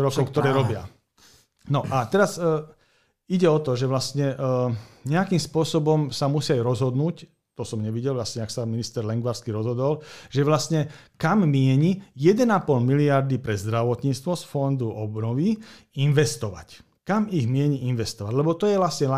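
No technical faults are audible.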